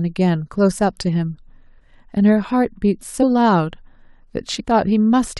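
At 3.22 s and from 4.59 to 4.61 s, compressed frames are skipped: about three 23.2 ms frames, roughly 70 ms of speech, vanish, so the speech jumps ahead rather than leaving a silent gap.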